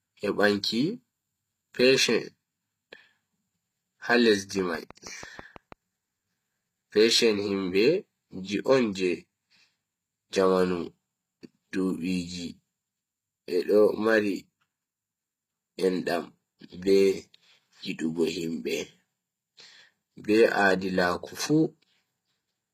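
HE-AAC compression runs throughout: the treble above the coded band is rebuilt from copied lower bands, leaving gritty, lispy s sounds, nothing above 14.9 kHz, and damage consistent with roughly 20 kbps.

A train of clicks runs from 4.59 to 5.73 s: about seven similar pulses at a regular 6.2 per second, roughly 5 dB above the speech, likely from interference or a faulty connection.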